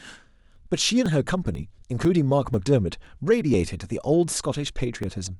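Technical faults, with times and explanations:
0.06 to 5.0 s: periodic USB or driver dropouts. Clicks recur about every 0.5 s, roughly ten in all. Each marks a brief loss of a couple of milliseconds. The missing audio is skipped, so the waveform jumps straight ahead and leaves a sharp discontinuity. That jump is heard as a tick. The fixed spacing points to a background task stalling the USB bus or audio driver on a regular cycle. The ticks are only audible where the speech carries signal.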